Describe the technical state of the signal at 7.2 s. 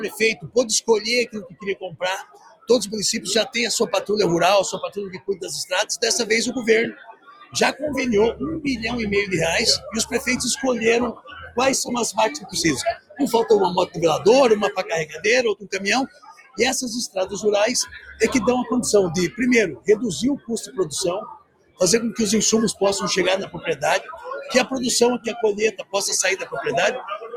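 At 7.2 s the audio sits inside a stretch where the sound was cut by the noise suppressor, running from 6.92 to 7.55 s, roughly 0.7 s in all. The suppressor judged this material to be noise and pulled it down by as much as about 17 dB, so held sound sinks or its decay ends early while sharp onsets mostly still get through. On a waveform the envelope dips across that span. A spectrogram would show the sustained bands weakening across that span.

Around this moment, the noise suppressor applied to music or sounds keeps acting on the whole clip. A processor built for speech treats sustained tones, ambience and reverb tails as noise, so the level swings by about 10 dB and the sound pumps and thins. A waveform shows a breathing, uneven envelope rather than smooth sustains. A spectrogram shows tails chopped off and stationary energy flickering in and out, with transients standing out against hollowed gaps.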